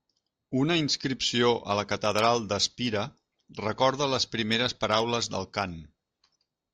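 Speech recording with no audible technical faults.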